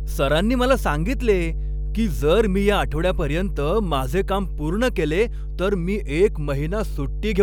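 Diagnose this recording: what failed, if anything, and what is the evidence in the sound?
The analogue wiring picked up mains hum. A steady 50 Hz drone runs under the speech from start to finish, sitting only about 5 dB below it. That points to a ground loop or a nearby transformer bleeding the power line into the signal path.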